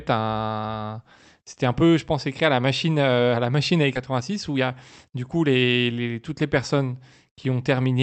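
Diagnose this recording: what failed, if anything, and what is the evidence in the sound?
A skip ahead in the jitter buffer discarded queued audio. Right after "à la machine à", at 3.95 to 3.97 s, roughly 0.7 s of speech vanishes with no gap.

A jitter buffer speed-up then cut repeated pitch periods to shed excess delay. From 4.05 to 5.93 s, speech runs at 111 percent at the same pitch and sounds hurried.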